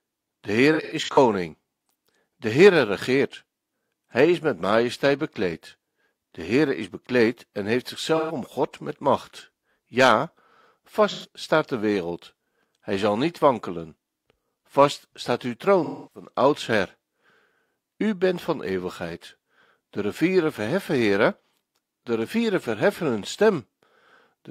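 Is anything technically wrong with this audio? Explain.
Yes, there's AAC frame loss with concealment in this speech at 0.73–1.18 s, 8.16–8.35 s after "is bekleed en heeft", 11.09–11.27 s before "staat de wereld", and 15.84–16.28 s after "staat uw". The decoder rebuilds the missing frames from the last good spectrum, so each gap comes out as a short smeared, noisy or phasey patch.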